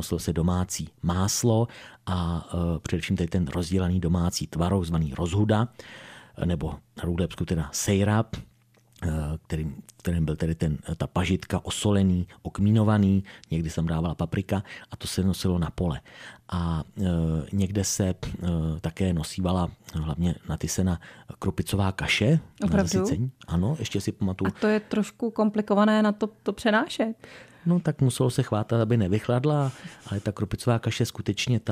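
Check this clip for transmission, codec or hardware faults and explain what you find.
Nothing stood out on listening to this speech recording that would point to a transmission, codec or hardware problem.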